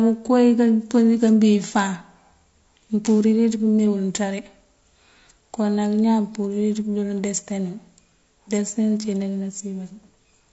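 From start to finish the speech sounds rough and grainy, with a hiss-like fill between the pitch harmonics and a thin, artificial top band. This is likely low-delay AAC compression of the kind used in video calls, with damage that fits a bitrate around 32 kbps. Its very short frames blur the harmonic structure of the voice. Ordinary longer-frame codecs at similar rates tend to smear or swirl instead, so this steady graininess tells them apart.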